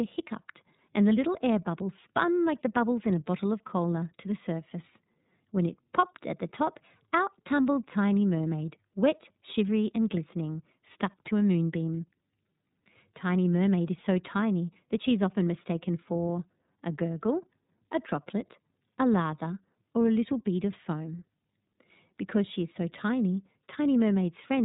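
From start to finish, the speech passes through the iLBC codec. Nothing above 3.8 kHz survives, so the sound is dull and narrowband. Each frame's excitation is coded on its own, leaving a plainly rough, synthetic edge. The damage fits 30 ms frames at about 13.3 kbps.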